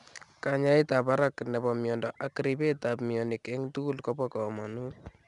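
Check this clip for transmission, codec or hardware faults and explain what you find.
One codec fault runs through the whole speech clip: 4-bit ADPCM compression. Each sample is coded as a coarse step from a prediction. The error is a gritty hiss that follows loud sounds. Nothing is heard above 10.7 kHz, which fits a rate near 89 kbps.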